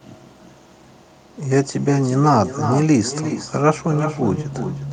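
A speech recording with echo and no canceller running throughout: every phrase returns about 9 dB quieter, roughly 0.4 s later, and thinner. The far end's loudspeaker output is re-captured by its microphone and sent back across the network unremoved.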